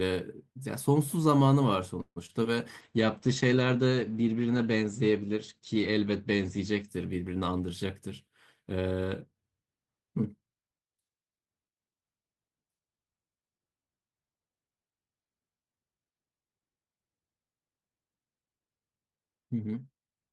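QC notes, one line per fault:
2.01–2.18 s, call audio freeze: packets were likely held up in transit and the jitter buffer ran dry, so the receiver stretched the last sound into a fading buzz that reaches silence for about 50 ms. Nothing is lost, but 147 ms of delay is added.
2.26–2.31 s and 2.43–2.47 s, short concealed packet loss: about 20 ms of audio failed to reach the decoder each time, and the receiver filled the hole by extending the previous sound before blending back, leaving a brief smear or wobble at each point.
2.81–7.76 s, call bitrate drop: the bandwidth estimate fell and the encoder was pushed to far fewer bits, which fits a fall from about 32 to 13 kbps. The cut-off falls from 20 kHz to 8 kHz, so the sound turns muffled and coarse, worst for about 3.42 s.
7.48–7.87 s and 8.26–9.33 s, jitter buffer speed-up: the buffer held more audio than its target, so the receiver trimmed short pitch-period pieces repeatedly to catch up. 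This removes around 50 ms and then around 100 ms, playing at 112% and 108% speed at unchanged pitch, so delivery sounds hurried.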